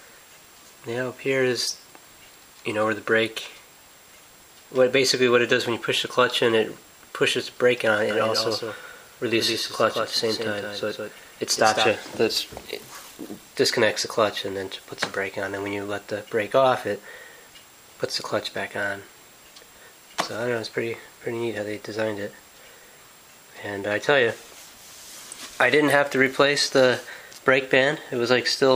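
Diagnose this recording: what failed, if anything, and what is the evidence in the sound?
A doubled audio track runs from 8.11 to 11.89 s. A full-band copy trails by roughly 150 ms, about 5 dB quieter. It has no decay or room colour. It starts and stops abruptly. The likely cause is a second, slower capture path mixed in.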